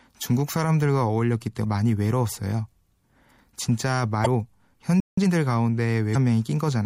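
Throughout, the sound is watery and swirly, with dulled treble and smeared attacks. This is likely MP3 compression, and the damage fits a low bitrate around 64 kbps. At 1.64 s, a brief glitch marks damaged data in the compressed stream: corrupted bytes make the decoder misread frames and resynchronise, and it recurs as short blips at 4.22–4.27 s and 6.11–6.16 s. From 5.0 to 5.18 s the sound cuts to silence mid-flow, likely a playback stall where the player ran out of data for about 170 ms. Right after, from 5.18 to 5.34 s, the audio rushes at double speed with unchanged pitch. That is time-compressed catch-up, as the player trims small cross-faded pieces to clear its backlog.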